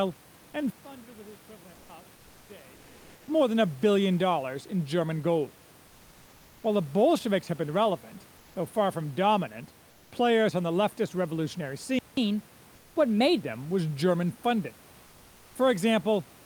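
Speech, with several technical faults. From 0.70 to 2.88 s, ending just before "more than a billion", the sound drops by about 23 dB. This is likely one channel inverted, so the two channels cancel when summed to mono. At 1.73 to 1.89 s, 2.15 to 2.49 s and 12.75 to 12.95 s, the natural background gives way to a flat, featureless hiss, about 2 to 3 dB quieter. That points to comfort noise in place of the background, likely from a codec's discontinuous transmission. After "on the leftist revolutionary", the audio goes silent for 185 ms, from 11.99 to 12.17 s. This is likely a playback stall, where the player ran short of data. A catch-up at higher speed follows from 12.17 to 13.41 s, until "them was". The audio runs 1.15 times fast and about two semitones high to recover the lost time.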